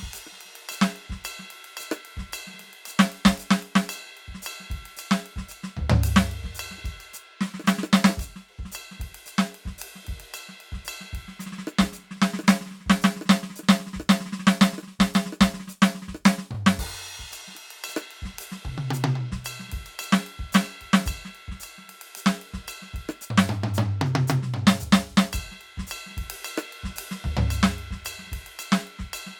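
Around 16.54 to 16.56 s the music hiccups with repeated frames: one block of about 23.2 ms plays twice, which points to a single compressed frame being sent or stored twice. You hear a tiny stutter, and the track runs 23.2 ms longer.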